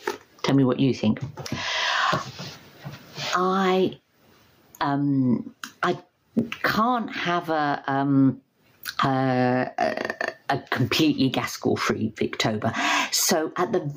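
Throughout the clip, the level rises and falls in a repeating breathing pattern, swinging by around 25 dB, while loud and soft passages sit unnaturally close together and the sound comes across as squashed. This is gain pumping. The likely cause is input gain set far too high for the microphone, with a fast limiter or compressor clamping down on each loud moment and then letting the gain recover, so the overall level keeps being dragged down and released.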